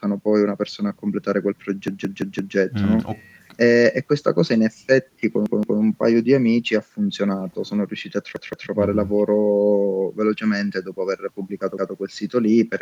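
Speech that stutters three times from a repeated buffer: the same chunk of about 170 ms plays five times in all from 1.88 to 2.56 s, and three times each from 5.46 to 5.80 s and from 8.36 to 8.70 s, which fits an 8192-sample buffer replayed when fresh audio arrived late. Little or nothing seems to be skipped. On a waveform or spectrogram each stutter shows as identical blocks side by side, with a hard vertical edge at every join.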